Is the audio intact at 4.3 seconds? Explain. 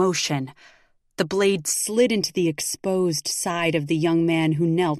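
No. From about 1.73 s to the end of the clip, 4.3 s included, the speech has channel delay with comb filtering. One channel runs late by roughly 0.4 ms, and when the two are summed to mono, the shared content cancels at evenly spaced frequencies, starting near 1.5 kHz. Those fixed notches hollow out the midrange and upper range, so the speech sounds hollow and phasey.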